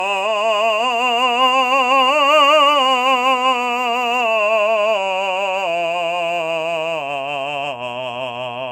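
From start to finish, the music sounds swirly and hollow. Attacks are smeared rather than crisp. Nothing is heard above 17 kHz. This is generation loss. The likely cause is repeated lossy coding, with the audio decoded and re-encoded about four times. The character fits AAC at around 96 kbit/s. Each pass quantised the signal again on a shifted frame grid. The noise and spectral gaps stacked up, so the damage sounds worse than one pass at that rate would.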